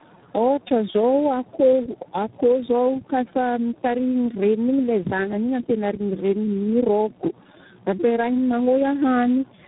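Speech throughout, carrying tandem speech coding for the whole clip. The sound has the rough, muffled, warbly quality of several narrowband speech coders in a row, consistent with about four, each re-encoding the previous one's already damaged output. Nothing is present above 3.8 kHz. A single low-bitrate codec would also be band-limited and slightly buzzy, but not this stacked graininess and smeared, wavering tone, which points to repeated decode-and-re-encode steps at network borders.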